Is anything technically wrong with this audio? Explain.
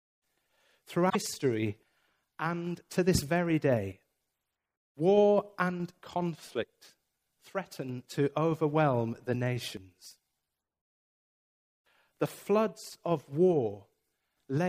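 Yes. From 1.06 to 1.16 s there is damaged data in a compressed stream. Corrupted bytes derail the decoder, which loses frame sync and resynchronises, giving a brief chirp, squawk, click or short hole. A spectrogram shows a short broadband smear, the waveform an abrupt discontinuity.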